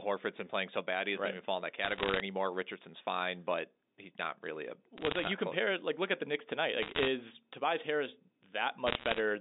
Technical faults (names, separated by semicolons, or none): bit errors on a digital phone line